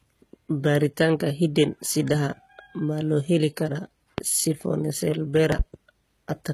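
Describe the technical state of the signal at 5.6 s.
At 5.6 s the signal carries a loud pop spanning 5.52 to 5.63 s, most likely from a sudden voltage step or spike entering the chain, such as a plug, switch, static discharge or driver glitch, which the downstream circuitry then shapes. It is heard as two sharp pops in quick succession, peaking about 20 dB above the speech, with the speech continuing underneath.

The same moment also carries the HE-AAC compression that runs through the whole clip. The encoder codes only the lower spectrum and synthesises the treble by copying lower bands upward under a coarse envelope, at a rate that fits roughly 20 kbps. The codec damage is plainly audible: the rebuilt top end doesn't align harmonically with the coded band, so sibilants sound gritty and metallic, and nothing is present above 15 kHz.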